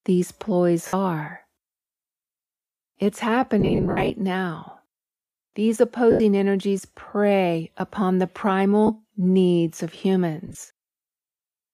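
Lost LE Audio frames at 0.87, 3.60–4.10, 6.11–6.20, 8.87–8.90 and 10.47–10.63 s: the decoder repeats the last spectrum with random signs, so speech smears into brief noisy gaps.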